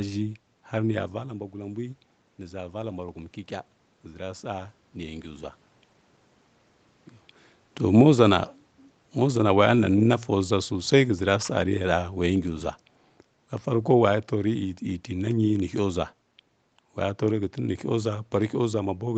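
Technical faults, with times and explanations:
1.12–3.06 s, automatic gain rising: Just after the talker moves away from the microphone, at roughly 1 s, the voice drops by about 11 dB. Over the next two seconds the voice and the room noise behind it swell together by about 3 dB. The automatic gain control has sensed the weaker input and is slowly raising its gain. Because the gain applies to the whole signal, the background climbs with the voice, and the recovery falls well short of the drop.
9.16–12.48 s, automatic gain falling: Not long after another change in the talker's position, at roughly 7.5 s, the level sinks by about 4 dB over more than three seconds. The room noise sinks with it. The gain control has judged the input too strong and is pulling its gain down gradually rather than at once, so the fade sounds like a slow drift. The whole band, which stops at 8 kHz through the call codec, moves down together.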